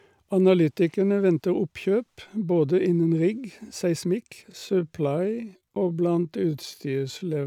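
From 4.47 s to the end, a time-stretched section slows the speech to about 0.64 times its pace without shifting pitch, likely from software stretching that repeats short pieces. It drags, with harmonics and syllables visibly elongated on a spectrogram.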